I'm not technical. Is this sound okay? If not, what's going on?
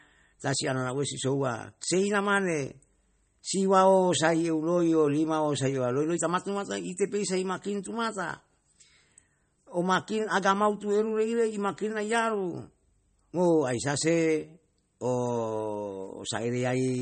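No. The recording was likely squeezed hard with MP3 compression, which throws away detail to save space. Throughout the speech, everything above about 8.4 kHz is missing, so it sounds dull, watery and swirly, with metallic chirps on s sounds.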